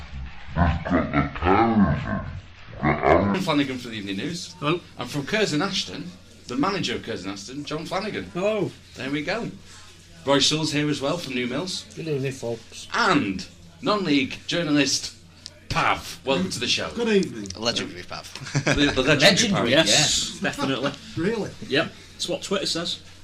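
From the very start up to about 3.34 s, the audio runs at half speed and drops a full octave, 12 semitones down. That's the classic stereo read as mono fault. The left and right samples, which alternate in the stream, got played back one after another as if they were a single channel. So everything drags and sounds sluggish and low, and a faint mirrored ghost of the sound turns up in the upper half of the spectrum.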